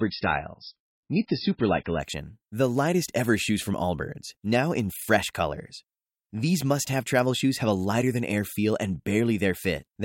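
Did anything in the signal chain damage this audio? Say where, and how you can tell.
Yes. The fault sits at the adaptive stream starting at a low bitrate, in network delivery and the codec. From 0 to 2.0 s the speech has nothing above 5.6 kHz and stronger codec artefacts, which fits a 16 kbit/s MP3. Quality then jumps without a gap, consistent with a 128 kbit/s stream.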